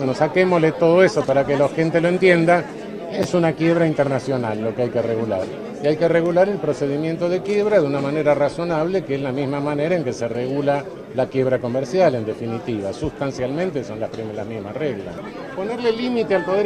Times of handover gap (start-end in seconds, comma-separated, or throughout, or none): none